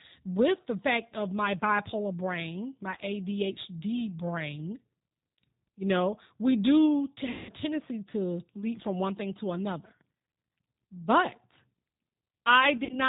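Throughout the clip the speech carries G.729 codec damage, which is plainly audible. The sound is band-limited with nothing above 4 kHz, and the voice has the slightly rough, synthetic texture of speech rebuilt from a vocal tract filter, a pitch predictor and a few pulses per subframe. This fits an 8 kbit/s G.729A stream.

From 7.31 to 7.53 s, after "know we do to" and before "to leap from one", there is VoIP packet loss concealed by the speech codec. About 180 ms of audio is missing, which fits nine lost packets. The decoder extends its last pitch and filter state with falling gain, so the gap becomes a stretched, buzzy tone or coloured noise that fades out. The voice is still weak and smeared briefly after normal packets resume, because each frame builds on the one before it.

From 12.77 to 12.98 s the same concealment happens in a scattered pattern. About 60 ms is lost across roughly 120 ms, with the longest run 40 ms, which points to three lost packets. 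This produces short stretched patches that fade, rather than one long concealed stretch.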